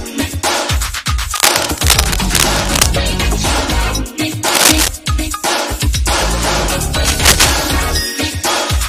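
A worn cable, connector or control was likely being moved, its contact resistance jumping about, which produces cable scratch noise: dense, uneven crackling bursts from 1.35 to 2.89 s at roughly the audio's own level, then louder from 4.48 to 4.89 s and 7.05 to 7.52 s.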